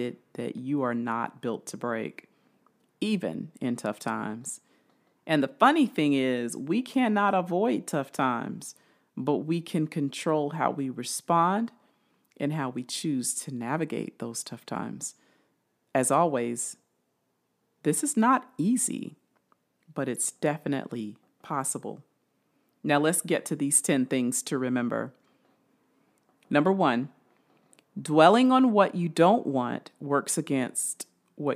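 Nothing in this bit of speech stands out as a fault at any point, so there's nothing to flag here.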